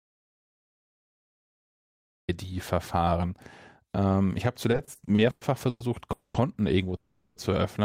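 From the very start until 2.29 s the clip is in an audio dropout to silence: pure silence with no room tone, likely from a lost input or mute while recording continued. Unlike a freeze, nothing is stretched; whatever happened then is simply gone.

Starting right after "ich habe", from 4.71 to 5.82 s, the speech hits repeated stalls (stutter). Eight short gaps, the longest 110 ms, are bridged by continuing the last sound, filling 370 ms, about a third of the span. Nothing is lost, but the delivery drags and judders in a repeated pattern, not one single hold.

Two call audio freezes follow, each a single hold: 6.12 to 6.36 s, a 220 ms hold whose fill fades and then sits silent for about 110 ms, and 6.96 to 7.38 s, a 400 ms hold with only 20 ms of silence. Packets likely arrived late, and speech resumes where it stopped with nothing skipped, unlike the opening dropout.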